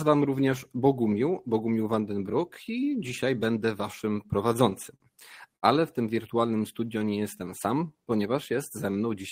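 From 4.23 to 5.03 s the speech shows repeated stalls (stutter): six jitter-buffer underruns are bridged by extending prior sound, 87 ms in total and at most 44 ms at once, so it drags unevenly. At 5.56 to 5.65 s a short stall from a late packet holds one sound for 60 ms until the packet arrives, with the delay rising by 60 ms. Between 6.48 and 7.94 s a jitter buffer slow-down repeats pitch periods to add 134 ms, playing at 91 percent speed with unchanged pitch and drawn-out sounds.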